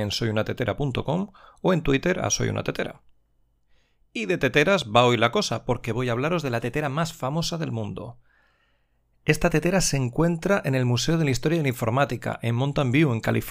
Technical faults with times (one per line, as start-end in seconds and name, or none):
none